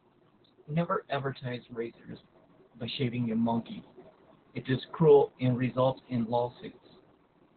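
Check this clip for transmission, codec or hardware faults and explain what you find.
The clip shows one codec fault, present for its whole length.

Opus voice compression runs throughout. The SILK speech coder cuts the band to narrowband, leaving nothing above 4.4 kHz, and quantises the excitation coarsely, which fits a bitrate of about 8 kbps. The speech sounds muffled, hoarse and slightly robotic. That grainy, buzzy roughness, not mere dullness, separates it from a plain low-pass filter.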